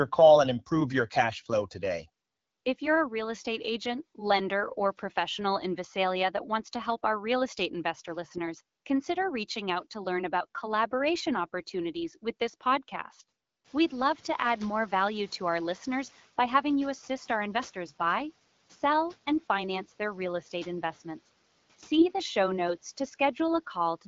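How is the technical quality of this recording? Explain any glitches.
Two short glitches stand out, both in the second half of the clip.

The first is the noise suppressor catching up, from 13.64 to 16.24 s. It starts after "opportunities with this podcast" and runs until "by having you assist". Background noise in the room jumps by about 20 dB near 13.5 s. The suppressor's noise estimate lags behind this rise. For about 2.6 s the noise comes through less reduced. Then it sinks by about 7 dB as the estimate adapts.

The second is AMR bit errors, at 21.96 to 22.03 s, just before "the show notes to". This burst lasts about 66 ms, which fits three damaged 20 ms codec frames. Bits in the less protected fields arrived flipped, at a rate of a few percent. The frames still decoded, but with misplaced excitation pulses and wrong pitch, gain and spectral values. The sound keeps its rough level but turns briefly hoarse and gargly.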